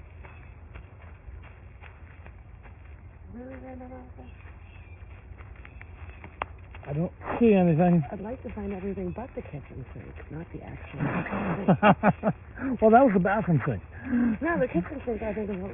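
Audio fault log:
Throughout, aliasing: the audio was resampled down without an anti-alias filter, so content above the new half-rate limit folds back as unrelated false tones, only moderately quieter than the real sound. The band ending abruptly at 3 kHz points to a 6 kHz rate; high detail sounds gritty and metallic.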